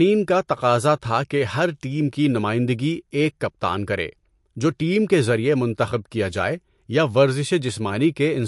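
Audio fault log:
Throughout, MP3 compression: the speech has no content above 11.3 kHz, with clearly audible codec artefacts across the whole clip. These are likely from MP3 coding at a low bitrate, consistent with roughly 55 kbps. With too few bits, the encoder discards the top band at a fixed point and drops quieter spectral components. Those components appear and vanish between frames, which makes the sound dull and gives it an unstable, processed texture.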